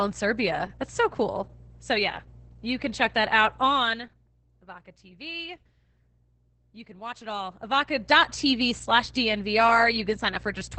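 Mains hum runs from start to finish: a steady 60 Hz tone, with its low harmonics, sits roughly 20 dB below the speech. Power-line current is leaking into the signal path, most plausibly through a ground loop or a transformer close to the cabling.

Opus voice compression also affects the whole clip. The speech sounds muffled above 8 kHz, hoarse, and faintly robotic. This heavy damage fits the SILK linear-prediction coder at a rate near 10 kbps, where the excitation is coded so coarsely that the natural texture of the speech is lost.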